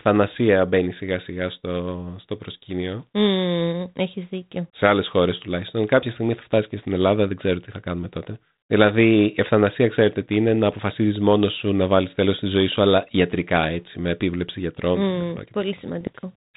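Bit errors on an ADPCM link hit this speech clip from 16.01 to 16.10 s, near the very end, heard as a short cluster of pops and a rough, gritty burst with brief jumps in level. Each flipped bit corrupts not just one sample but the decoder's adaptive step size and predictor, so the damage rings on for several milliseconds before the decoder settles again. The error rate is low, a small fraction of a percent, which is why the disturbance stays confined to one brief stretch. The underlying telephone-band G.726 coding carries light coding roughness and nothing above 4 kHz, which fits the 32 kbit/s rate used on cordless phones.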